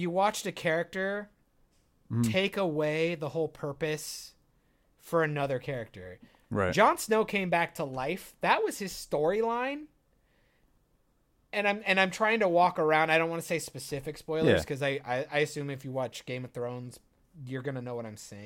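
No technical faults are audible.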